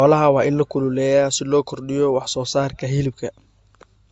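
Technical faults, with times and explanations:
Throughout, transcoding between lossy codecs: the speech sounds dull, with nothing above 8.1 kHz, and carries two layers of smeared, swirly artefacts at once. This likely comes from an MP3-like encode re-encoded by Opus, where the second codec spends bits re-encoding the first one's damage.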